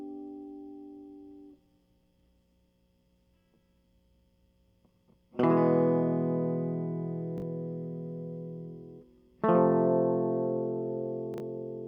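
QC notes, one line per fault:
7.38–7.42 s and 11.34–11.40 s, chunks out of order: the music briefly stutters into a jumbled, scrambled moment. At each spot a 20 ms slice of audio plays late, one chunk behind at 7.38 s and two chunks behind at 11.34 s, so it sounds after material meant to follow it. Nothing is missing, but the misplaced slice creates three abrupt waveform joins around the garbled instant.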